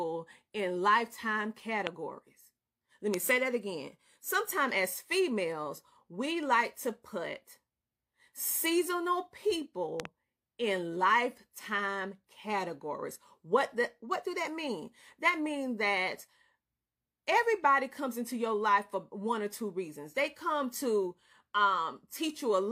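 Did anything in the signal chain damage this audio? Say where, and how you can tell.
Yes. A loud pop enters the chain, likely at the analogue wiring stage from a loose connection or a static discharge, which adds sudden voltage steps to the speech. Single pops sit at 1.87 to 1.89 s and 3.14 to 3.16 s, and a double pop runs from 10.00 to 10.07 s, each peaking roughly 20 dB above the speech. The circuits after the fault turn each step into a brief thump while the speech carries on underneath.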